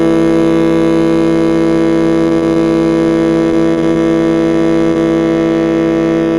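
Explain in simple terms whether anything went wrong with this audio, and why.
Several things went wrong with this music.

Overlap-add ripple runs through the whole clip. The audio was chopped into overlapping pieces and joined back unevenly. So the loudness pulses up and down about a hundred times a second. It sounds like a rough, buzzy flutter.

There are two short stalls from a late packet, at 2.29 to 2.33 s and 2.54 to 2.63 s. A piece of audio arrived late. The player held the last sound for a few hundredths of a second, then carried on. Nothing is lost, but a sound hangs briefly.

Short concealed packet loss happens at 2.39 to 2.44 s and 4.92 to 4.97 s. About two hundredths of a second never arrived. The player patched the hole by stretching the sound just before it. You hear a tiny smear or blip.

Repeated packet loss (robotic sound) covers 3.51 to 3.97 s. Four small pieces went missing in quick succession, the longest about a quarter of a tenth of a second. 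Each was patched, so that stretch sounds choppy.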